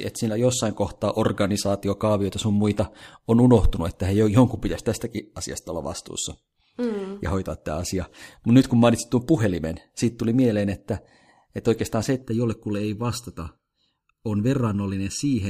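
From 12.22 s to the end, the speech turns hollow and phasey, a sign of channel delay (comb filtering). One channel arrives less than a millisecond late, so summing to mono cancels evenly spaced frequencies, starting near 700 Hz. Unlike flanging, these notches never move.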